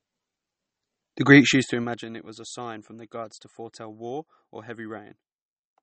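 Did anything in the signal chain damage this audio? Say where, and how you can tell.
Yes. The damage sits at the codec stage, most likely a low-bitrate MP3 encode, and it runs through the whole speech clip. Nothing is present above 8.4 kHz, which fits an encoder's fixed treble cut-off. The texture is plainly watery and swirly, with metallic chirps on s sounds and smeared attacks. Starved of bits, which points to a rate around 32 kbps, the encoder drops weak frequency lines that then flicker on and off from frame to frame.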